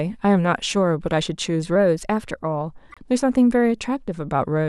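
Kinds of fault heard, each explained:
Drift correction step: From 1.76 s to 2.71 s the speech runs about 5.5% fast and rises 92 cents, close to a semitone, with speed and pitch moving together, then returns to normal. The likely cause is clock-matching software changing the playback rate in a single step to rebalance its buffer. Rate and pitch changing together, with abrupt edges, point to a deliberate rate step rather than gradual drift.
Corrupt frame decoded: A short burst of misplaced spectral energy runs from 2.90 s to 2.98 s and sounds like a squeak or blip laid over the speech. Damaged bits in the compressed stream were decoded anyway, so wrong gain or spectral values put energy at frequencies where it does not belong. The roughly 86 ms span suggests a few consecutive frames were hit, each contributing its own frame-length stretch of garbage before clean decoding resumes.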